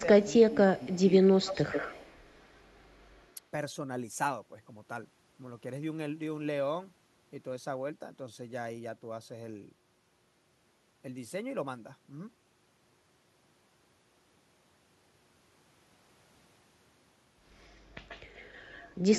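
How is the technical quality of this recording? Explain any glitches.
The recording has two problems on the call path: brief suppression during double talk near the start, and an echo leak at the beginning and again near the end.

Speech suppressed in double talk occurs from 0.0 to 0.56 s and from 0.76 to 0.98 s. The level dips by roughly 15 dB at worst, then about 10 dB. The likely cause is an echo canceller that could not separate near speech from loudspeaker echo and attenuated both.

An echo leak is audible from 0.84 to 1.02 s as a very faint copy delayed about 275 ms. From 1.41 to 2.29 s, 18.08 to 18.95 s, and 19.15 s to the end, a clearer copy follows about 136 ms behind. The likely cause is a speakerphone whose canceller left residual pickup that was sent back.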